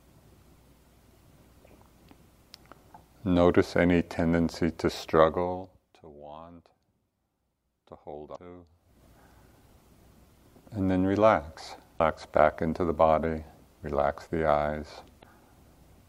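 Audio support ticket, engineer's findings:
Damaged data in a compressed stream: three short glitches at 8.32–8.38 s, 11.95–12.00 s and 15.19–15.24 s, each about 50 ms. Probable component is the compressed file or its transport. Some bytes in the stream got lost or overwritten, the decoder couldn't parse those frames, lost sync and hunted for the next valid header, hence the glitch. The fader-style level moves sound smooth and aren't involved.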